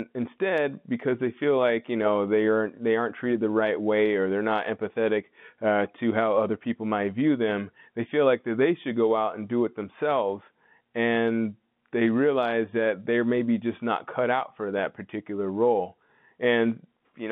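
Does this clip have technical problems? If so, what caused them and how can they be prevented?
No, nothing here counts as a technical problem: it's speech carried over ordinary G.711 telephone coding, so the narrow phone-line band, roughly 150 Hz up to 3.6 kHz, is just how that kind of line sounds, and there's nothing that needs fixing or preventing.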